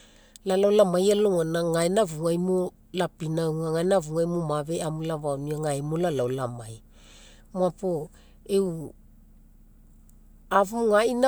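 Nothing in the recording stands out as a technical fault, so there's nothing to flag here.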